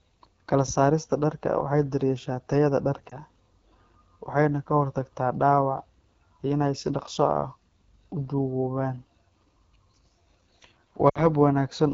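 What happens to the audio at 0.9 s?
The AMR wideband (HD Voice) codec runs throughout, and at 0.9 s the speech sounds rough and raspy, consistent with its low 8.85 kbit/s mode modelling up to 6.4 kHz.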